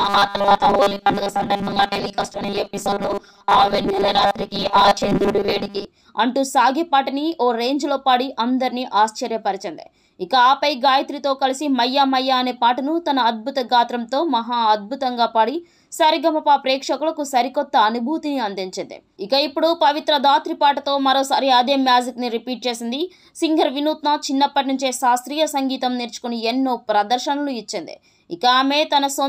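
From the start, about 0.01 s, to 5.86 s, the sound has a robotic quality from repeated short buffers. It becomes a rigid, metallic buzz fixed at 200 Hz. The outline of the sound still comes through roughly. The likely cause is audio arriving too seldom. The gaps seem filled by looping the last 5 ms chunk, which sets the 200 Hz pitch. Most of the sound in this stretch is repeats rather than new audio.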